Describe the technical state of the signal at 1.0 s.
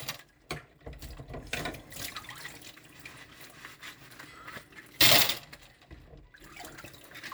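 Nothing is wrong with the signal at 1.0 s: the sound there comes through intact, with no dropout, distortion or other fault to be heard.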